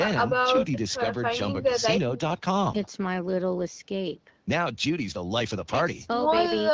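Speech recording with no technical faults to report.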